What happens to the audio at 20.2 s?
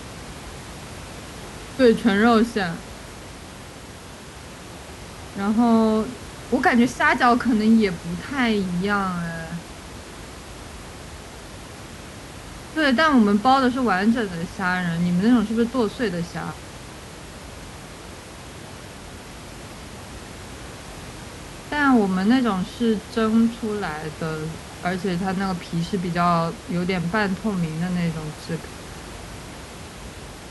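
At 20.2 s the speech continues intact, with only the room's own background noise audible, sitting about 17 dB below the speech.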